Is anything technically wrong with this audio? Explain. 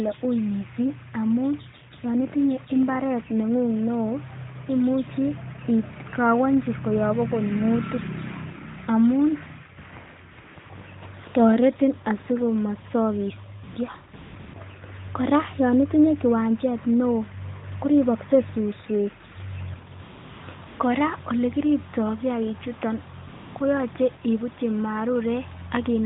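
Yes. AMR comfort noise appears in twelve brief gaps, clustered at 10.3 to 10.7 s, 13.6 to 14.5 s, 20.0 to 20.8 s and 23.3 to 23.6 s. Each lasts 20 to 420 ms. The phone judged these moments silent and stopped sending speech frames. The receiver filled them with smooth synthetic noise, so the real background drops out and a steady hiss switches in and out.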